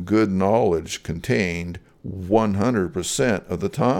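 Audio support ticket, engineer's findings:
Engineer's findings: no fault found in the speech audio on this support ticket.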